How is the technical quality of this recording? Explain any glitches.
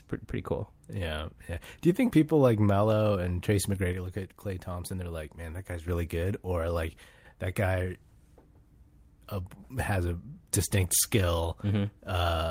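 The speech has two sudden dips in level. The likely cause is that one channel drops out, from 3.93 to 5.88 s (ending just before "really good or like") and again from 7.04 to 7.25 s (just before "that guy"). The level falls abruptly by about 6 dB because the mono sum loses one stereo side.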